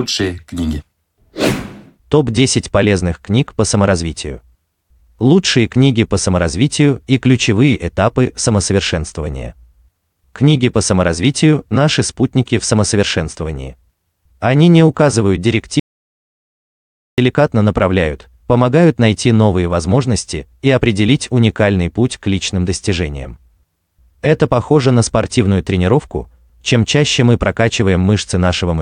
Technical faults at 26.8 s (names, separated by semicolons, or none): none